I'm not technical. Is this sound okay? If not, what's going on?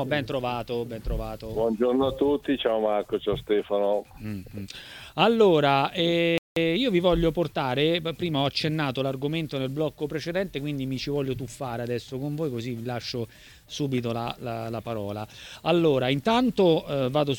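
No. The player likely ran short of data, a playback stall, so the sound drops to silence for about a fifth of a second, from 6.38 to 6.56 s, then resumes.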